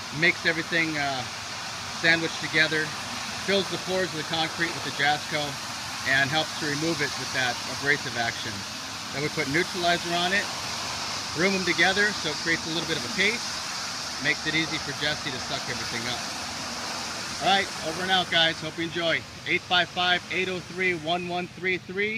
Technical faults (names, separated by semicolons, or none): none